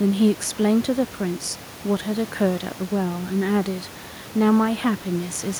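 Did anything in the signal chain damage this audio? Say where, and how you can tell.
No, nothing in the chain damaged this speech.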